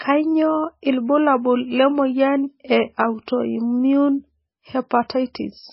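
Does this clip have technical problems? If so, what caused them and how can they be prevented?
Yes. MP3 compression, throughout: nothing survives above 5.6 kHz, and the heavy, watery smearing fits a very low bitrate around 17 kbps, likely from the encoder starving for bits. Encoding at a higher bitrate would prevent it.

Pre-echo at 3.26 s, right after "lemoyian e": a sharp attack falls late in a transform block, so its quantisation noise leaks about 18 ms ahead as a short hiss. More bits would keep it below hearing.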